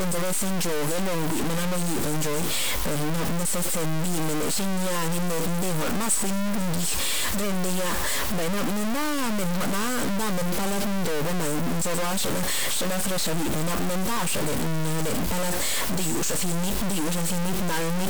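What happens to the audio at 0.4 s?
At 0.4 s, as throughout the clip, the speech passes through what is likely low bit depth without dither: samples are truncated to very few levels, consistent with 3-bit truncation, so the error follows the signal. It sounds grainy and sputtering, with the distortion only about 10 dB below the speech.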